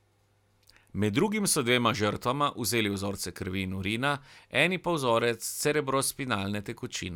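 No technical faults are audible.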